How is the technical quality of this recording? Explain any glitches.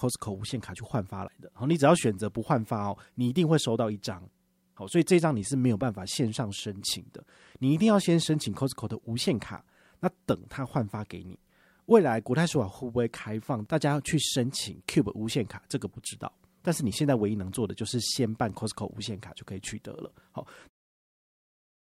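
No glitches turn up anywhere in this speech recording, and the gentle fade-out that begins at around 20.5 s and finishes at 20.7 s is just a smooth editor's touch at the end.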